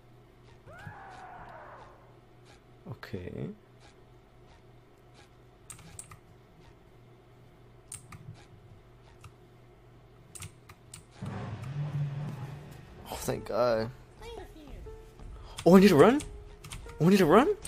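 Right around 14.38 to 14.40 s there's a quick blip, about 20 ms long, and it's damaged data in a compressed stream. Some of the encoded bytes at that point were corrupted, so the decoder couldn't read that frame cleanly, lost its footing and had to hunt for the next valid frame header before playback settled again. You hear that as a short glitch that doesn't belong to the surrounding sound, and then it's gone.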